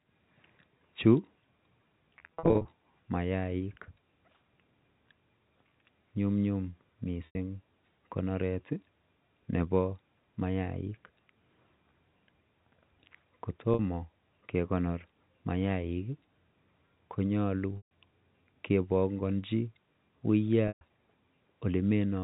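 Packet loss with pitch repetition occurs at 2.25 to 2.65 s, 7.26 to 7.35 s, 13.74 to 13.79 s, 17.77 to 17.91 s and 20.68 to 20.81 s. Missing stretches of the speech were filled by looping the last pitch cycle and fading it away. The first event is many brief dropouts, none over 40 ms, that add up to 260 ms across 400 ms and sound like a slightly held buzz. The later gaps of 50 to 140 ms hold a note briefly before it fades, all over a G.711 telephone band limited to 4 kHz.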